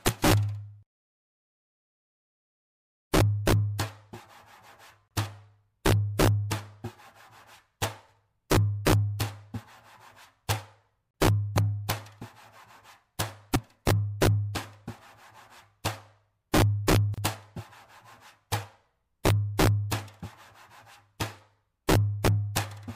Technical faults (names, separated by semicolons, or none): integer overflow; gap at a join of encoded pieces